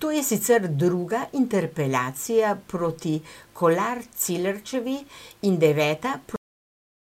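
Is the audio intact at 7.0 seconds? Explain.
No. By 7.0 seconds the speech has already been gone for a while: at 6.36 s it stops abruptly in the middle of a sound, with no natural decay, and digital silence runs from there to the end of the clip. This is a cut-off end. The final stretch of audio was never written out or played back, so the recording simply ends partway through whatever was being said.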